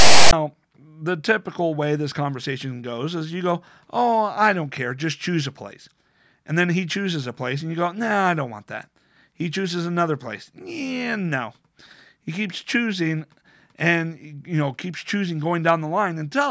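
The recording opens with file tags played as audio, from 0.0 to about 0.33 s. A block of metadata at the start of the file was decoded as though it were sound. Its text bytes come out as a loud, harsh rasp, pushed off-centre because the character values are not balanced around zero. The zero padding turns into silence. The burst starts and stops abruptly, with hard edges, before the speech begins.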